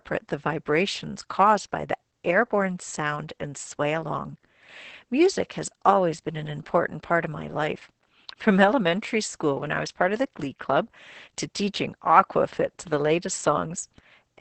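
Opus voice compression throughout: nothing survives above 8.6 kHz, and coarse excitation coding, fitting roughly 10 kbps, leaves the speech muffled, hoarse and slightly robotic.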